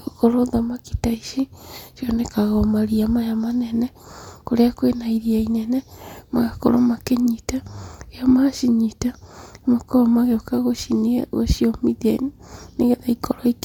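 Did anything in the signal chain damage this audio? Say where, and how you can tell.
No, nothing in the signal chain has damaged this speech recording. No stage between capture and playback leaves any audible mark on it.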